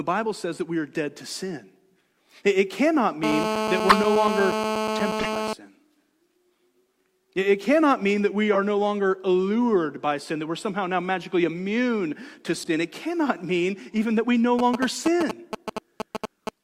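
From 3.23 to 5.53 s, a GSM phone buzz sits on the speech. A nearby 2G phone in a call pulses 217 times a second. The audio circuit rectifies those pulses. The result is a hard, raspy, steady 217 Hz buzz, about 2 dB below the speech.

Corrupt frames are decoded at 3.89 to 3.97 s, 5.19 to 5.28 s, 8.53 to 8.58 s, 12.54 to 12.69 s and 14.85 to 14.94 s. Damaged compressed data was played anyway. Each gives a brief chirp or noise burst. The first is the loudest. The one at 8.53 s falls between "cannot mean that we" and "no longer allured by". The one at 12.54 s follows "now magically immune to".

From 14.59 to 16.49 s, after "even that we no", GSM signalling bursts appear. A phone sends short groups of radio bursts, and the circuit rectifies them. It sounds like a galloping dit-dit-dit of short 217 Hz buzzes, roughly as loud as the speech.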